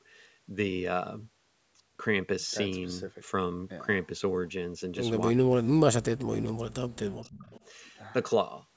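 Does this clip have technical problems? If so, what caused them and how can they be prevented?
Yes. Between 5.33 and 5.95 s, 6.11 and 7.0 s, and 7.2 and 7.49 s the speech collapses in chunks, dropping by roughly 40 dB in the first two spans and around 35 dB in the third. This is speech suppressed in double talk, likely caused by an echo canceller that could not tell the near talker from loudspeaker echo while both sides spoke, so it attenuated everything. A canceller with better double-talk detection, or a headset on the loudspeaker side, prevents it.

A faint delayed copy of the speech appears at 7.24 to 7.3 s and again at 7.49 to 7.65 s, trailing the original by about 303 ms and sitting roughly 30 dB and then 25 dB below it. This is echo leak, likely from a loudspeaker-based endpoint whose canceller failed to fully remove what its microphone picked up and sent it back, arriving in short scraps. 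Using headphones or improving that endpoint's echo cancellation and acoustic isolation prevents it.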